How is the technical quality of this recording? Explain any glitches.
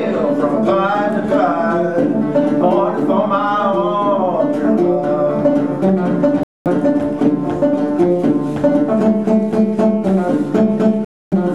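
Two brief dropouts interrupt the recording. At 6.43 s and again at 11.05 s the audio cuts to silence, for about 224 ms and then about 272 ms, before it returns. The likely cause is a Bluetooth stall: interference delayed packets, the headphones' buffer emptied, and playback halted until the resent data arrived. Unlike a clean edit, each gap is dead silence that breaks the sound mid-flow, with no smoothing or filled-in sound bridging it.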